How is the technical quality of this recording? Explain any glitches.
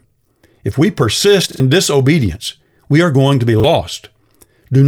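Two brief repeated-buffer stutters mar the speech. At 1.52 s, after "we persist", new audio arrived late, so the device replayed its last 40 ms buffer twice more, and roughly 70 ms of speech went missing before "disobedience we are going". At 3.6 s, after "are going to be", one extra replay of the same 40 ms chunk leaves a hard-edged stutter.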